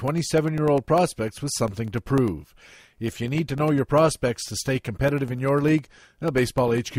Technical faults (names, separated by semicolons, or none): periodic USB or driver dropouts